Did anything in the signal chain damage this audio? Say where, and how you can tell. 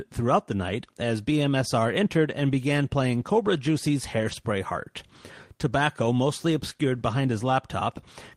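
Yes, the network stage: lost packets rebuilt from error correction around 3.19 s after "entered and began", and 4.19 to 4.33 s. Low-bitrate copies fill the gaps, so it goes rough and noisy instead of dropping out.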